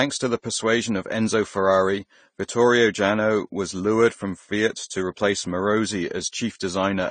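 Throughout the speech, nothing survives above 9 kHz, and two kinds of codec damage overlap, the artefacts of each codec heard together. That layering points to transcoding between lossy codecs, likely Vorbis then AAC-LC at low bitrates. A spectrogram shows a flat 9 kHz ceiling.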